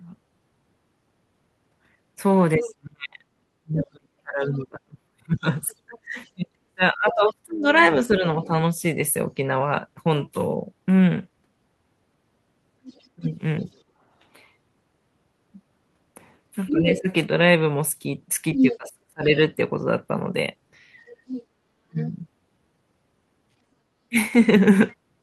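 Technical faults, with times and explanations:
2.56–8.51 s, speech suppressed in double talk: the talker dips repeatedly, falling as much as about 35 dB, with roughly four seconds lost in pieces. Both ends were talking at once, and the echo canceller likely could not tell the loudspeaker echo from the near talker, so it pulled everything down.
2.64–8.47 s, other side's voice leaking through: a second voice sits underneath at about 15 dB below the talker. It is likely loudspeaker playback of the far end that the echo canceller did not fully remove from the microphone signal during the overlap.
12.84–13.65 s, other side's voice leaking through: a brief, faint trace of the far-end voice appears at about 25 dB under the speech. It is likely residual loudspeaker echo that slipped past the canceller when both sides spoke together.
13.15–13.68 s, speech suppressed in double talk: the talker drops by about 25 dB for roughly a third of a second. 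The canceller likely treated the overlapping talk as echo and attenuated the near voice along with it.
16.68–22.09 s, other side's voice leaking through: the far-end voice comes through strongly here, only about 5 dB below the talker and almost competing with it. This is likely loudspeaker pickup that the echo canceller largely failed to subtract.
16.7–24.16 s, speech suppressed in double talk: across this stretch the talker is intermittently pushed down by as much as about 30 dB, about a second in total. Suppression likely engaged repeatedly during the overlap and clipped parts of the near speech.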